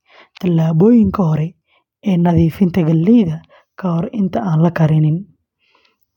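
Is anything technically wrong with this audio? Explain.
No, there is nothing technically wrong with this speech recording; the signal holds steady and intact throughout, with no audible faults.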